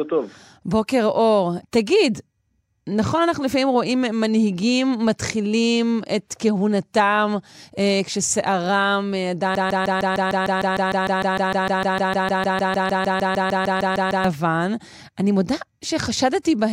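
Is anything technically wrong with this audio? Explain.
Yes, there's a broken-record loop from 9.55 to 14.24 s in this speech clip. A 0.15 s fragment repeats back to back 31 times, a stutter that swallows whatever speech belonged there, likely from a stalled player, encoder or stream resending its last buffer.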